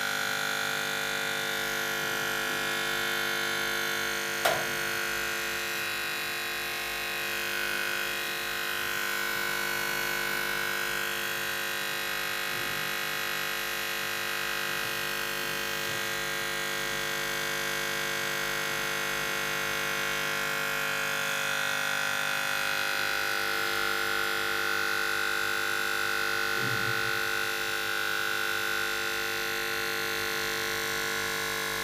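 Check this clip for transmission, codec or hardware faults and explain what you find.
Nothing in the clip points to a transmission, codec or hardware fault. No problem can be heard at any point in the audio.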